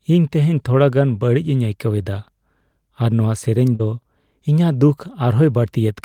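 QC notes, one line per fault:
3.75–3.81 s, short concealed packet loss: Just after "ᱱᱚᱣᱟ ᱥᱮᱨᱮᱧ", about 40 ms of the speech never arrived at the decoder in time. The receiver covered roughly 38 ms of that gap itself. It carried the last sound forward, extending its pitch where it was voiced and using shaped noise where it was not. It then crossfaded back into the real signal. The result is a brief smear or wobble in the speech.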